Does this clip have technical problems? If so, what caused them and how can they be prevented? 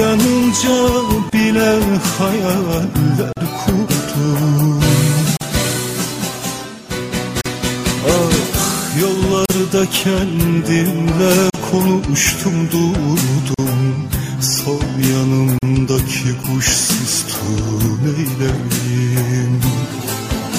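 Yes: sound drops into brief silences with abrupt, smeared edges at 1.30, 3.33, 5.37, 7.41, 9.46, 11.50, 13.54 and 15.59 s, the first 30 ms and the rest 43 ms, one every 2 seconds. This is a gap at a join of encoded pieces: each 2-second segment was encoded separately and joined with the encoder's start-up delay and final-frame padding left in. To prevent it, encode the audio as one continuous stream or trim the encoder delay and padding before joining segments.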